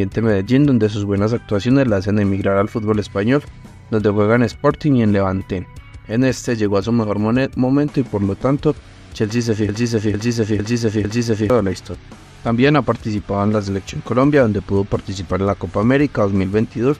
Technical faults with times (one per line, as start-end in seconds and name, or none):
9.69-11.50 broken-record loop